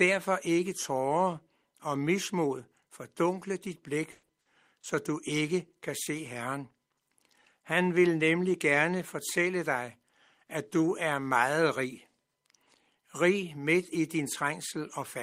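Repeated packet loss (robotic sound) from 4.11 to 4.85 s: four gaps, longest 120 ms, were patched by extending prior sound, leaving choppy speech with pieces missing.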